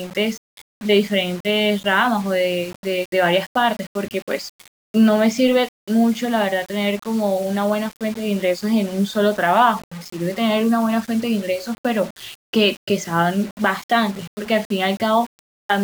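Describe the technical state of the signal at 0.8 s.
At 0.8 s the speech carries a grainy, gritty distortion that rises and falls with the sound itself, roughening quiet stretches and making the faintest parts sputter or drop out. It runs through the whole clip, not just this moment. The likely cause is low bit depth without dither: the error sits only about 25 dB below the signal, which fits a 6-bit signal rounded without dither, so the error tracks the waveform instead of forming a steady hiss.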